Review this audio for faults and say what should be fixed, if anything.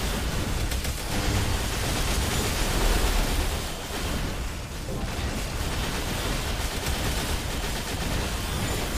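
No faults can be heard anywhere in the recording, so nothing needs fixing. It can be left as it is.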